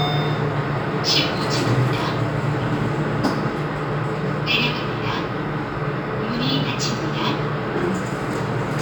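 Imaging from linear upsampling runs throughout, consistent with 24 kHz audio raised to 48 kHz: faint mirrored content, about 30 dB down, fills 12 kHz to 24 kHz on a spectrogram, adding metallic shimmer.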